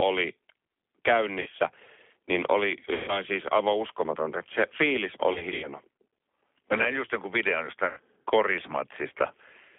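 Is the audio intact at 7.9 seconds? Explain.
No. Right after "näin just jonkun videon", from about 7.87 to 8.00 s, there's VoIP packet loss concealed by the speech codec. Roughly 100 ms of audio went missing, which fits five 20 ms packets, and the decoder filled the hole by carrying its last pitch and filter forward at a falling gain. You hear the sound smear into a buzzy tone or a coloured noise that fades, and it stays a bit weak and off for a moment after real data comes back, since each frame builds on the one before.

That moment also carries the G.729 codec damage that runs through the whole clip. At 8 kbit/s the decoder rebuilds speech from a vocal tract filter, a pitch predictor and a handful of pulses per frame, all squeezed into a 300 Hz to 3.5 kHz line band. The result is plainly rough and synthetic-sounding, with everything above the band gone, so even the audio around the dropout is thin and slightly artificial.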